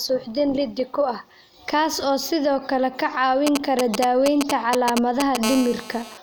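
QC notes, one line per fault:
3.47 to 5.37 s, GSM signalling bursts: a 2G phone close by is talking to the network without being in a call, sending short clusters of radio bursts that the audio circuitry rectifies into sound. You get that galloping dit-dit-dit of brief 217 Hz buzzes, sitting at roughly the same level as the speech. The stop-start rhythm comes from the phone only transmitting in short groups while it sets things up.
5.43 to 6.18 s, GSM phone buzz: right after the signalling stops, a phone appears to go into a call and transmits continuously, pulsing 217 times a second. The circuit demodulates those pulses into a steady, hard, raspy buzz at 217 Hz with a thick stack of harmonics, about 10 dB below the speech. It has nothing to do with the speech itself and holds constant until just before the end.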